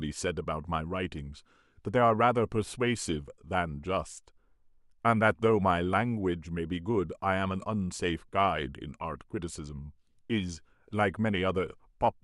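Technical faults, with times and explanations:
No technical faults are present.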